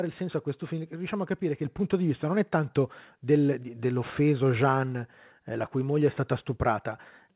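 At 1.65 s, right after "a capire che" and just before "punto di vista non", the microphone volume steps up. The call software judged the input too quiet and raised the device's input volume in one jump, about 5 dB, so the voice and the background noise get louder together, mid-sentence. Because both rise at once, it sounds like the mic was nudged up. The band tops out at 4 kHz throughout, typical of a G.711 call path.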